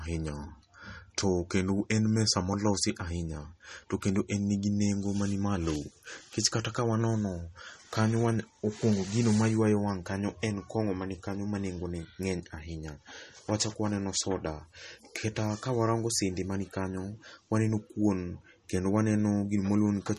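All the way through, the speech has a watery, swirly edge with nothing above 13 kHz, likely MP3 compression at a starved bitrate, which fits roughly 32 kbps.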